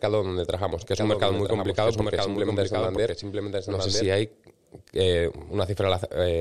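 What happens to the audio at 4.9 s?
At 4.9 s the speech carries on intact, with no dropout, click, distortion or other fault.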